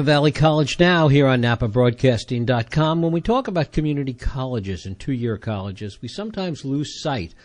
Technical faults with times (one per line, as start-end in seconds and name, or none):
0.00-7.45 MP3 compression
0.33 pre-echo